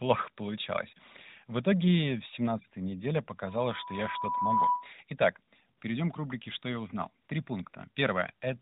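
From 3.44 s to 4.92 s a loudspeaker feedback squeal rises out of the speech. The microphone is hearing its own loudspeaker, and at 984 Hz the loop gain tops one, so that single tone feeds on itself and swells over about a second until it sits several decibels above the talker. Unlike a steady test tone or mains hum, it starts faint, climbs on its own, and stays locked to one pitch.

Later come three brief bursts of AMR comfort noise, each 40 ms long, at 5.78 s, at 7.24 s just after "я узнал", and at 7.70 s. Each time the phone judged the line silent and stopped sending speech frames, and the receiver filled the gap with synthetic noise shaped from a rough level and spectrum estimate. What sets this apart from a dropout is that the gap is not dead silence but a smooth, even hiss that cuts in and out abruptly. The narrowband AMR-NB coding around it, which sounds consistent with the 12.2 kbps mode, caps everything at 4 kHz.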